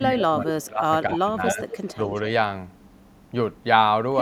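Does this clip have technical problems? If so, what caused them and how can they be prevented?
Yes. Speech suppressed in double talk: the speech dips by up to about 15 dB from 0 to 0.91 s, and by up to about 20 dB from 1.08 to 1.68 s. The likely cause is an echo canceller treating overlapping talk as echo. Better double-talk detection prevents it.

Echo leak: a copy of the speech returns 0.25 s late at 1.47 to 1.53 s, 1.69 to 1.95 s and 2.15 to 2.21 s. It is about 5, then 10 dB below the speech, and the last is faint. The likely cause is loudspeaker sound that the far end's echo canceller missed. A headset prevents it.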